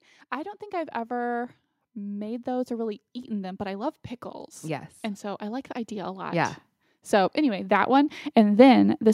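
From 0.31 s to 9.09 s the level climbs steadily by about 15 dB, the sign of automatic gain rising: the gain control judged the input too quiet and kept pushing its gain up across nearly the whole clip. What separates this from a talker simply moving closer to the microphone is that the background noise swells in step with the speech and the tonal balance stays the same, with no added proximity bass or change in room sound.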